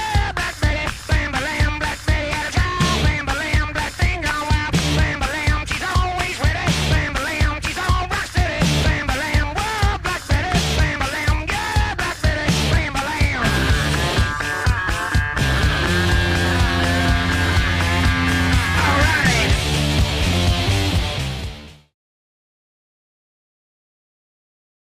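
No technical faults can be heard in this audio. Near the end the level fades out smoothly, beginning at around 20.5 s and reaching silence by 21.95 s, with no click or hard edge.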